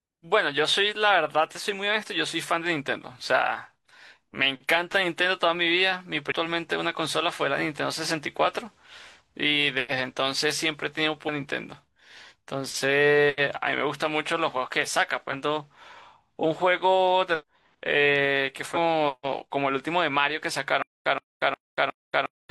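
A speech recording with two kinds of fault. First, there is damaged data in a compressed stream at three points: 6.27–6.32 s, 17.37–17.44 s and 18.72–18.78 s. Corrupted bytes in the encoded frames leave the decoder unable to parse them, so it loses sync and hunts for the next valid frame header. Each event lasts roughly 50 to 65 ms and comes through as a brief chirp, squawk, click or short hole cutting into the speech. Second, from 20.82 s to the end there is a stutter with silent gaps, likely caused by the player or stream stalling and replaying its last buffered fragment on each retry. The same 125 ms burst of speech repeats four times, each followed by about 234 ms of digital silence, giving an even 359 ms cycle. The speech that should have filled that stretch never plays.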